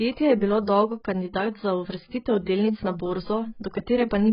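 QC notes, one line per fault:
throughout, AAC compression: likely a heavily squeezed AAC-LC encode, consistent with about 12 kbps, removing everything above 5.2 kHz, so the speech sounds dull, smeared and warbly.
3.63 s, pre-echo: quantisation noise spread across the transform block leaks ahead of a sharp attack, adding about 10 ms of hiss and softening the onset.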